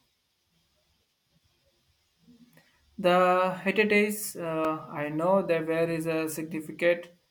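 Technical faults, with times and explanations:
0.34 s and 4.65 s, repeated buffer: a 1.33 ms slice, which fits a 64-sample buffer, plays three extra times and then two, losing a few milliseconds of audio. The slice is so short that each repeat sounds as a brief buzzy click, not silence.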